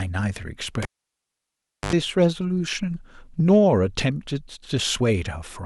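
At 0.82 s the cable is pulled and plugged in: a pop, then roughly 1.08 s of near silence, then a 75 ms burst of 50 Hz mains buzz as only the tip touches, and a second pop at 1.93 s. The buzz is what distinguishes this from a plain dropout.

From 2.22 to 2.25 s, hard clipping flattens the peaks by about 1 dB of overdrive, giving a short crackle on the loudest moment. It returns from 3.51 to 3.58 s. The overload is slight, so it stays a crackle and never becomes a continuous fuzz.

At 3.39 s, compressed frames are skipped. About 20 ms of sound, which fits a single frame of roughly 21.3 ms, is missing, and the audio jumps ahead.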